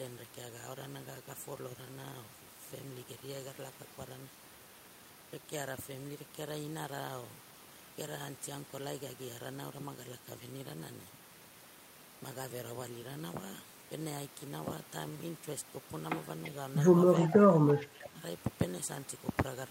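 A faint, delayed copy of the speech slips in at 16.44–16.51 s, louder at 17.23–17.30 s, and faint again at 17.73–17.87 s, each trailing the original by 339 ms and sitting roughly 15 to 25 dB down. This echo leak likely comes from a far-end echo canceller letting loudspeaker pickup through. From 17.27 to 18.21 s the speech dips, by around 15 dB at worst and for about half a second in total. That is likely speech suppressed in double talk, with both sides talking at once and the canceller turning down both its own talker and the echo.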